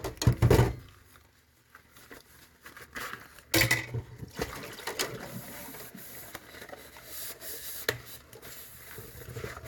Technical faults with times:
none

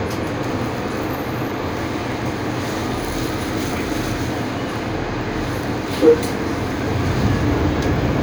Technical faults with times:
none

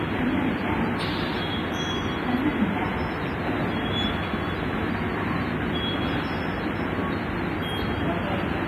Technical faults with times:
0.00-8.68 WMA compression

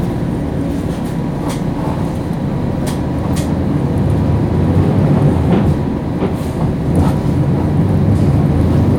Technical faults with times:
3.76-5.72 hard clipping

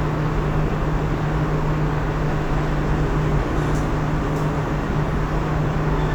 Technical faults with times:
none

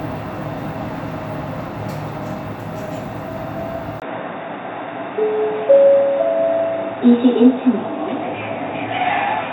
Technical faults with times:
4.00-9.52 input switched to a poorer device

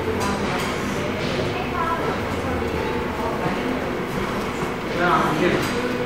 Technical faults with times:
none

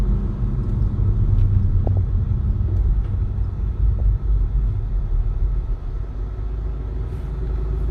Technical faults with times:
1.85-1.97 DAB burbling
3.99 DAB burbling
6.04-6.15 DAB burbling

